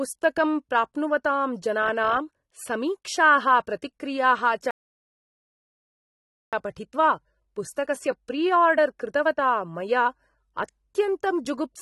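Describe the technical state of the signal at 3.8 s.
At 3.8 s the speech carries AAC compression damage, present from start to finish rather than at that moment alone. The high end is cut away, so the top is dull. Sibilants turn fizzy and smeared, and held vowels warble. The damage is plainly audible. The likely cause is low-bitrate AAC-LC, consistent with about 32 kbps. The encoder drops high bands and coarsely quantises the rest against a hearing model, leaving gaps in the spectrum.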